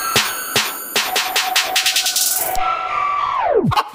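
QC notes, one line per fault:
No fault found in this clip.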